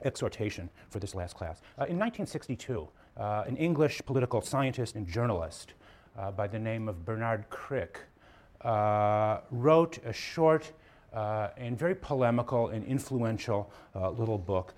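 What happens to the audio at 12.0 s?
Nothing goes wrong at 12.0 s; the audio plays through that moment intact, with no audible fault.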